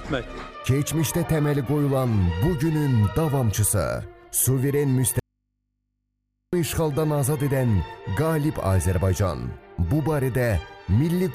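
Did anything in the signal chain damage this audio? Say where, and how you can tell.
Yes. From 5.19 to 6.53 s the signal drops out for about 1.33 s, leaving a faint residue of mains hum roughly 55 dB below the normal level before the sound returns abruptly. This audio dropout to a faint residue likely points to the analogue wiring, where a connection broke and left the input open. On a waveform, the gap is a near-flat stretch with sharp edges. A spectrogram shows the broadband energy vanishing there, with only thin horizontal hum lines remaining.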